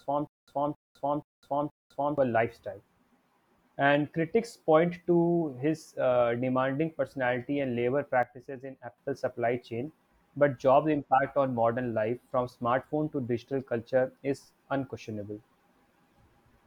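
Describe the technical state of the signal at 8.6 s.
At 8.6 s a sudden gain jump is in effect from 8.23 to 8.98 s, likely a level setting applied without a ramp, dropping speech and background noise together by about 8 dB.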